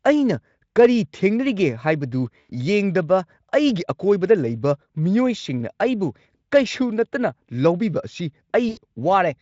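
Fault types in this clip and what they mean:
VoIP packet loss concealed by the speech codec: packets went missing and the decoder bridged each gap by extending its last pitch and spectral envelope at steadily falling gain. It occurs twice, at about 2.39 to 2.51 s and 8.69 to 8.79 s, where the speech smears into a short buzzy tone or coloured noise that fades. The gaps are about 100 ms and 80 ms, which fits five and four 20 ms frames, and the surrounding Speex coding adds little audible colouring.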